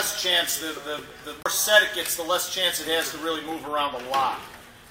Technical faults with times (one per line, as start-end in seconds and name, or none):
1.43-1.46 CD skip